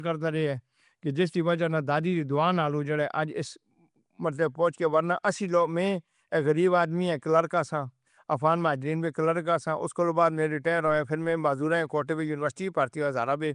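Throughout, the speech sounds rough, hissy and underwater, likely from Nellymoser compression filling starved bands with noise. The spectrogram shows speckled noise patches and nothing above 10.6 kHz.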